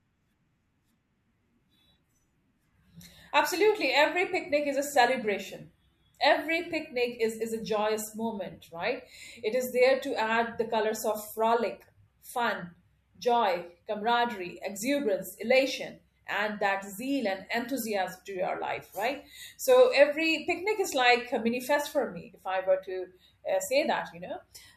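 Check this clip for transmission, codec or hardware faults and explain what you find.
No faults detected.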